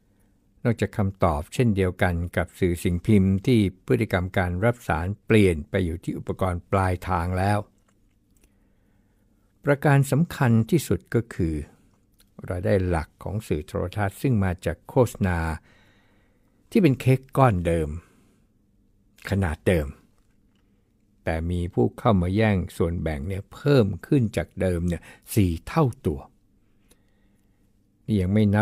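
Listening through the speech recording, nothing stood out as a technical fault at any point.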